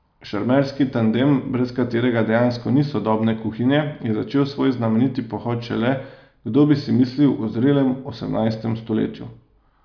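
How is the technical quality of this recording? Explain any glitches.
No glitches detected: the speech recording runs without any audible technical faults.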